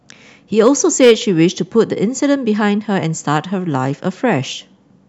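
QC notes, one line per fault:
0.60–1.43 s: hard clipping. The speech peaks overdrive a stage by about 5 dB and are cut flat, adding high harmonics heard as harsh fuzz on the louder syllables.
1.79 s and 3.32–3.36 s: hard clipping. Peaks just reach the limit, by about 0 dB and 1 dB, giving brief crackle.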